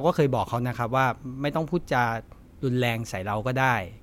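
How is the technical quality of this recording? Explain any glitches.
Nothing in this short bit of speech sounds like a glitch, so there's nothing to explain here.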